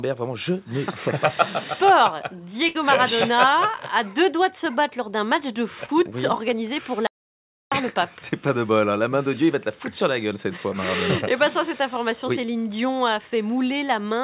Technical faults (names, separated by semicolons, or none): burst of packet loss; short concealed packet loss; audio dropout to silence